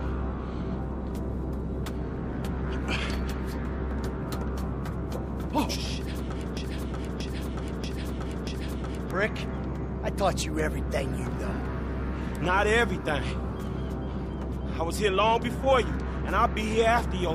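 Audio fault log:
6.57–9.11 s broken-record loop: a 0.63 s fragment repeats exactly four times back to back, replacing the audio lost there; likely a stalled stream resending its last piece.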